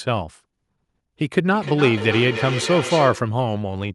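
From 1.54 to 3.41 s the speech returns at a steady interval of around a third of a second, at most about 9 dB below the direct voice: feedback echo between two devices. A second device in the room replays the call, and this microphone picks it up, outside its own echo canceller's reach.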